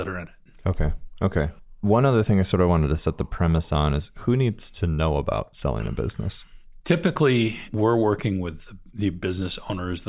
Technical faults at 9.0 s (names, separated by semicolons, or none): none